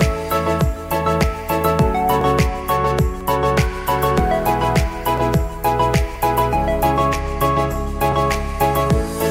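At 2.21, 3.21, 4.19 and 5.18 s the sound jumps with a tiny skip, roughly once per second, matching 1.0 s segments. This is overlap between stream segments: adjacent segment timestamps overlapped, so the player discarded 6 to 18 milliseconds at each join, breaking waveform continuity.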